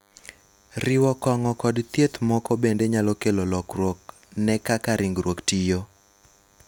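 A nearby DECT cordless phone or base station is transmitting a short radio burst every 10 ms, and the audio circuitry is rectifying it. Throughout the speech this produces DECT cordless phone buzz: a thin, steady 100 Hz buzz rich in harmonics, sitting roughly 40 dB below the voice.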